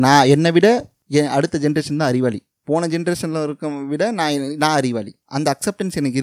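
From 0.13 to 0.18 s the loudest peaks have their tops sheared flat, giving a brief harsh, crackling edge. This is most likely microphone overload, with the input driven about 3 dB past the converter's limit. Unlike codec distortion, it affects only the peaks of a small share of the waveform.

At 1.02 s the speech and the background noise together drop by about 5 dB in a single step and stay there, likely the microphone volume being stepped down by call software reacting to that clipping. A fade or gate would change level gradually or leave the background untouched.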